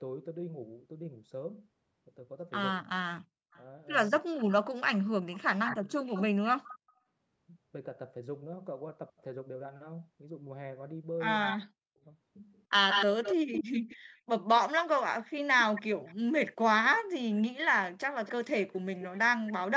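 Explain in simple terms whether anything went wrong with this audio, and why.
An echo canceller on a speakerphone likely missed its loudspeaker sound, causing echo leak: from 3.51 to 6.77 s and 11.42 to 19.52 s, speech repeats about 0.3 s later.

When both sides talked at once, the canceller likely turned everything down, causing speech suppressed in double talk: the sound drops nearly to silence in brief pieces between 4.19–5.98 s, 11.55–13.85 s and 16.17–16.52 s.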